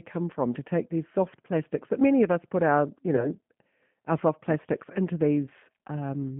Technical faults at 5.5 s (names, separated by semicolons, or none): G.729 codec; VoIP packet loss concealed by the speech codec